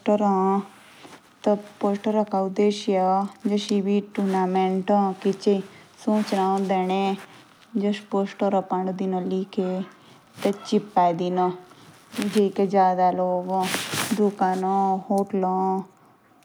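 No dropouts, clipping, noise bursts or other audible defects turn up anywhere in this speech recording.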